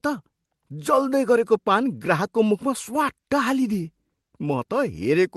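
No faults are audible in this speech; the call path shows only as a top end that stops near 12 kHz, which fits Opus running at around 24 kbps.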